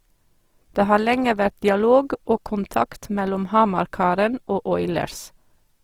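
From start to finish the speech carries Opus compression damage that is plainly audible: tones sound grainy and rough rather than clean, with a noisy, fizzy texture where detail should be. This is likely low-rate Opus in its CELT music mode. It keeps each band's energy but refills starved bands with folded or noise-like content, which fits a bitrate near 24 kbps. A spectrogram would show full bandwidth with few holes, but smeared, speckled upper bands.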